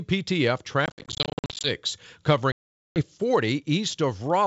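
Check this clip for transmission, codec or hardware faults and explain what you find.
Packet loss on an ADPCM call occurs twice, from 0.86 to 1.71 s and from 2.52 to 3.02 s. In the first span about 450 ms goes missing in many short silent holes scattered over 780 ms, the longest 60 ms, consistent with around fifty lost packets. The second span loses about 440 ms, roughly forty packets. Each gap has hard edges. Unlike plain dropouts, speech resumes distorted for a moment afterwards, because the decoder's adaptive predictor and step size have drifted from the sender's and must re-adapt. The G.722 wideband coding itself shows no more than faint coding damage.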